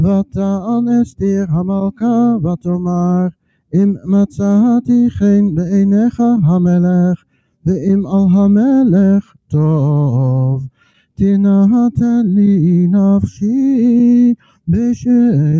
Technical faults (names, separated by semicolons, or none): noise suppressor applied to music or sounds; sound cut by the noise suppressor